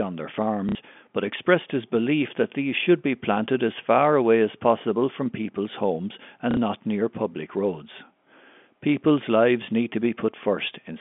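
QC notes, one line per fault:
0.69–0.75 s and 6.51–6.57 s, packet loss with last packet repeated: each time about 60 ms of audio failed to arrive, roughly two packets' worth, and the receiver filled the gap by replaying the last packet it held. Repeating the same packet gives the 60 ms run a brief buzzy, robotic stutter before the speech resumes within the narrow telephone band.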